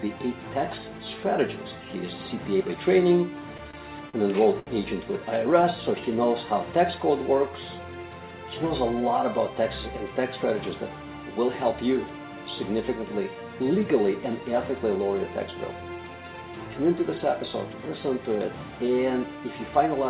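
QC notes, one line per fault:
3.57–4.69 s, repeated stalls (stutter): the jitter buffer ran dry four times, about 154 ms stretched from the last sound, so it drags without losing anything.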